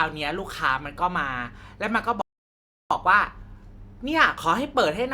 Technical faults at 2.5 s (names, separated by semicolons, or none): rebuffering stall